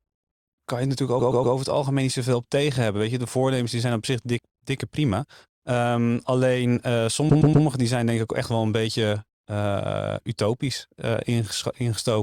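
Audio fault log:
1.19–1.55 s and 7.29–7.65 s, repeated frames: a short run of compressed frames was sent through the decoder more than once, so the same 120 ms block of speech plays four times in a row at each point, which fits a run of about six frames. Each repeat is heard as a stutter, and each event stretches the speech by 360 ms.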